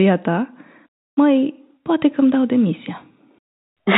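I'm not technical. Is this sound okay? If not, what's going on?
Yes, nothing is wrong here: the speech comes through ordinary G.711 telephone coding, which explains the narrow, phone-like sound with nothing above 4 kHz, and that is normal for a phone line.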